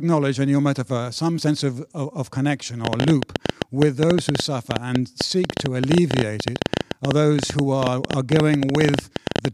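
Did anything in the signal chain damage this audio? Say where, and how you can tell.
Yes. Intermittent pulses are entering the chain, most likely electrical interference picked up in the analogue wiring, and they produce a train of clicks. It starts at 2.85 s, just after "of of of connection", and runs to 9.46 s at about 11.4 clicks per second on an irregular pace, around seventy in all. Each click has much the same shape and peaks roughly 20 dB above the speech, so the ticking stays prominent through the pauses as well as under the talking.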